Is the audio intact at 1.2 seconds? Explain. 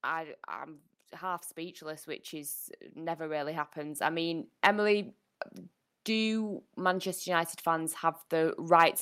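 No. At 1.2 seconds the automatic gain is rising, a swell running from 0.47 to 4.57 s. The gain control judged the input too quiet and kept raising its gain, by about 14 dB in all. Speech and background grow louder together.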